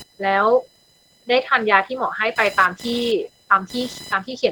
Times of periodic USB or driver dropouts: 0.43-3.49

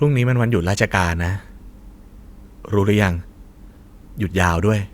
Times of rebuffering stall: none

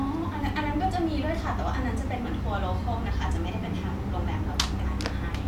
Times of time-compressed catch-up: none

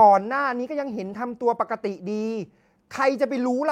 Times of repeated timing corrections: 0.50-2.87

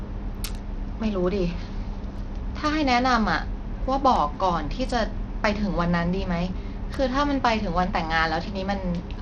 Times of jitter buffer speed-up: none

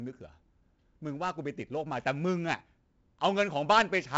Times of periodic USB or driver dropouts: none

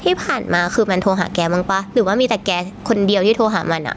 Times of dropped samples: none

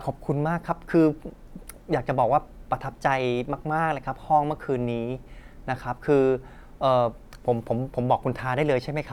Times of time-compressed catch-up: none

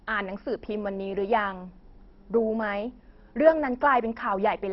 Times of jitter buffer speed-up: none

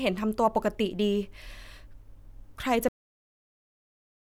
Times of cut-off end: 2.88-4.22

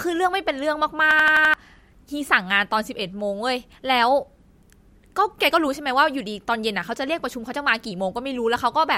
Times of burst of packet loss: none

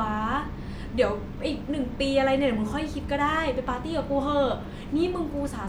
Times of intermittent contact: none

